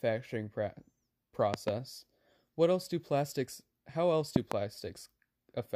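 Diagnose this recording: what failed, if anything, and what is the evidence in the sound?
Loud pops, paired at 1.54–1.71 s and 4.36–4.54 s: twin waveform spikes about 20 dB above the speech and vertical broadband lines on a spectrogram, likely analogue-wiring voltage transients.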